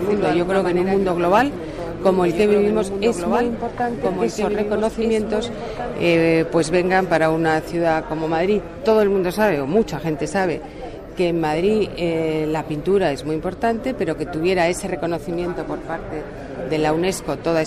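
From the start of the clip until 5.96 s, the audio carries a doubled audio track: a second full-band copy trails about two seconds behind, roughly 5 dB quieter, with no decay or room colour. It likely comes from a slower second capture path or a misaligned edit. On a spectrogram, every pattern reappears two seconds later, slightly fainter. The copy is already present at the opening and cuts off abruptly at 5.96 s.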